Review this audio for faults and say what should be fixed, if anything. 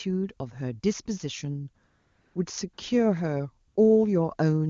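AMR comfort noise replaces the real background three times: from 1.87 to 2.35 s (about half a second), from 2.73 to 2.77 s and from 3.67 to 3.75 s. In each pause the sender's voice activity detector judged the talker silent and stopped sending speech frames. The receiver then generated a steady, smooth synthetic noise from a rough level-and-spectrum description. Unlike a dropout or a noise gate, these gaps are never true silence. Unlike packet-loss concealment, they carry no warbling or repeated fragments of speech. They simply switch to an even hiss that differs from the surrounding background. To prevent it, disable discontinuous transmission on the sending side, or make the voice activity detection less aggressive so short pauses keep carrying real speech frames.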